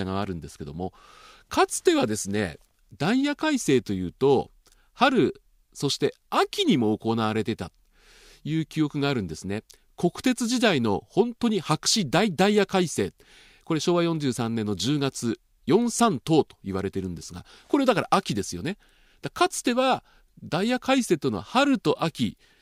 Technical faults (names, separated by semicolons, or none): none